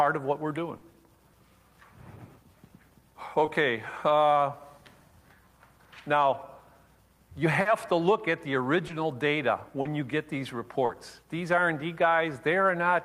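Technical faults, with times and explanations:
0.77, 3.45, 7.61, 8.87, 9.81 and 10.85 s, short concealed packet loss: 20 to 40 ms of audio arrived too late, so the receiver patched each gap by extending the preceding sound, leaving brief smears.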